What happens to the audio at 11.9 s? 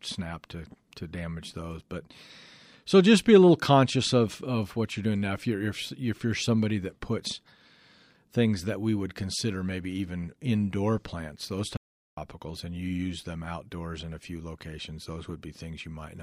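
The speech drops out to silence from 11.77 to 12.17 s, about 0.4 s, between "even indoor plants those" and "and you use them". The input was likely lost while recording carried on writing silence, so even room tone vanishes. The waveform shows a flat line, and the spectrogram shows a blank vertical band.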